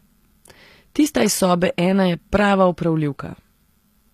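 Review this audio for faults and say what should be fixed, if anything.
Throughout the clip the audio was likely squeezed through HE-AAC compression at a low bitrate, around 24 kbps. The upper band is rebuilt from copied lower bands rather than coded, so harmonics misalign, s sounds turn gritty, and nothing remains above 14.9 kHz. Encode at a higher bitrate, or use plain AAC or lossless, so the treble is coded directly.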